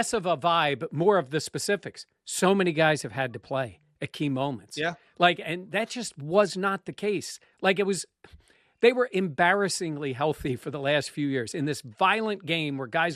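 From start to finish, the speech carries plainly audible MP2 compression damage. The top end sounds dull and muffled. Upper bands drop out and return, so the sound flickers. What remains has a gurgling, granular roughness. The likely cause is MPEG Layer II coding starved of bits, which fits a rate near 80 kbps. With so few bits, whole high sub-bands get switched off, and the surviving bands are quantised coarsely.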